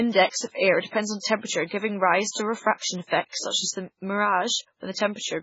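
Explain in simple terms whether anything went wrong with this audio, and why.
Heavy MP3 compression damage runs through this speech from start to finish. Nothing survives above about 7.6 kHz, so the treble is cut off flat, and the speech sounds watery and swirly. That happens when an encoder starved of data throws away quiet detail, letting faint parts blink in and out from one moment to the next. That flickering, not just the missing treble, is what separates it from a simple muffling filter. The likely cause is saving the file at a very low MP3 quality setting.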